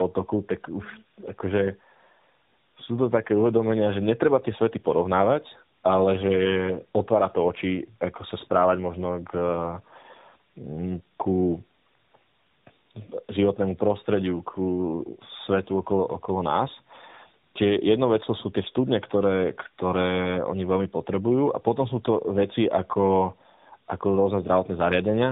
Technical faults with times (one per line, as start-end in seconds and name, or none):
0.00-25.31 tandem speech coding